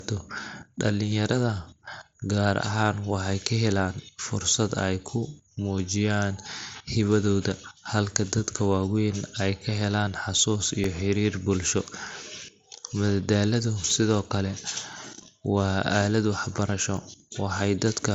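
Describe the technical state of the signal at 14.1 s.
At 14.1 s the speech falls within periodic USB or driver dropouts (10.84–18.00 s): a blocked bus silences about a millisecond every 1.024 s, giving regular ticks.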